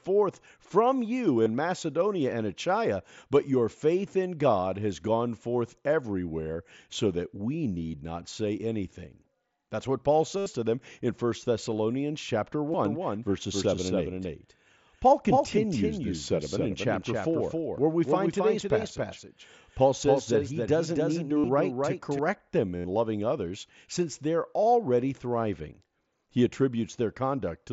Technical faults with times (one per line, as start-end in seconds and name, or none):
1.43-1.46 concealed Bluetooth headset packet loss
10.38-10.46 concealed Bluetooth headset packet loss
12.72-12.74 concealed Bluetooth headset packet loss
12.85-22.19 doubled audio track
21.38-21.44 concealed Bluetooth headset packet loss
22.76-22.84 concealed Bluetooth headset packet loss